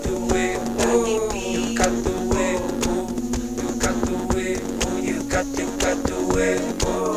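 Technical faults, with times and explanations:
No technical faults can be heard in this clip.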